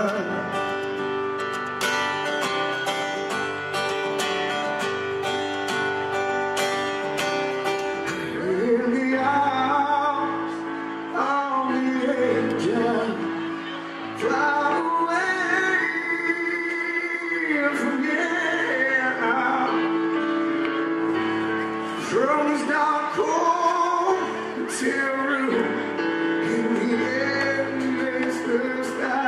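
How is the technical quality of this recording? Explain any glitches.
Nothing technical gets in the way here; I didn't hear a single glitch anywhere in the recording.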